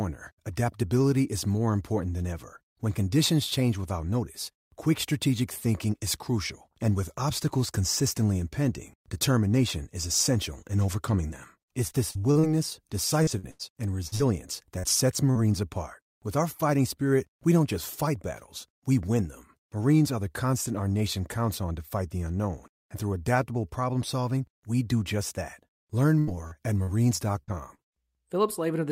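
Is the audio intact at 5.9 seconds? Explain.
Yes, the speech at 5.9 seconds is intact, with no dropout, click, distortion or other fault at that moment.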